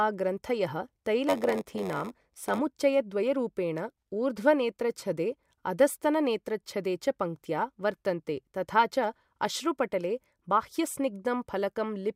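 From 1.28 to 2.59 s, the speech carries a steady buzz at about 93.8 Hz. This is a block size mismatch (padded). One stage hands over shorter blocks than the next stage reads, and the missing part of each block is filled with silence. The repeating gap makes the buzz at the block rate, which fits a 512-sample read block. The speech also slows to 0.938 of normal speed, though its timbre stays the same.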